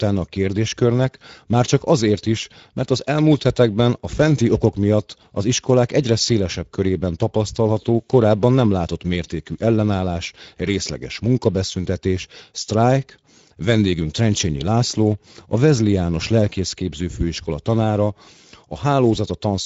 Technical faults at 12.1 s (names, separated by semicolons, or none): Speex codec